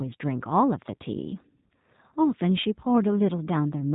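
From start to finish the speech sounds rough and synthetic, with a dull top end because nothing above about 3.8 kHz survives. This is G.729 codec damage, here the G.729A variant. Instead of storing the waveform, the codec rebuilds each 10 ms frame from a vocal tract filter, a pitch predictor and a few pulses, which fits an 8 kbit/s stream. The coarse reconstruction leaves the speech intelligible but plainly artificial.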